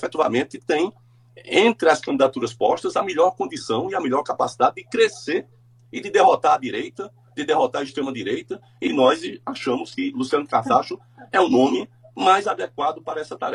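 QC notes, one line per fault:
8.31–13.55 s, adaptive stream at a lower bitrate: quality drops abruptly with no gap, and the treble turns synthetic with thicker codec artefacts. This fits a switch from 96 kbit/s AAC to 24 kbit/s HE-AAC. Unlike a plain low-pass, the top end sounds regenerated rather than simply removed.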